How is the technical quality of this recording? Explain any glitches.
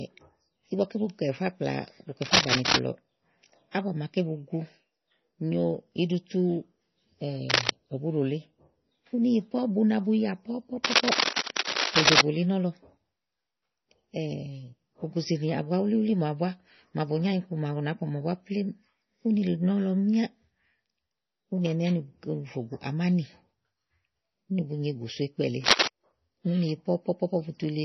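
The quality is poor. The whole recording has heavy compression damage, and four scratchy noise bursts break through it.

Throughout, the speech sounds watery and swirly, with nothing above 6 kHz. That is likely MP3 compression at a low bitrate, around 24 kbps. Starved of bits, the encoder cuts the treble and drops weak components frame by frame. A spectrogram shows a flat ceiling at 6 kHz and blotchy, flickering patches below it.

Cable scratch noise appears at 2.22–2.77 s, 7.49–7.70 s, 10.84–12.22 s and 25.64–25.89 s. Each burst is a harsh rustle, somewhat louder than the speech. The likely cause is a worn contact whose resistance jumps as it moves. On a waveform these are dense, ragged spikes; on a spectrogram, broadband vertical smears.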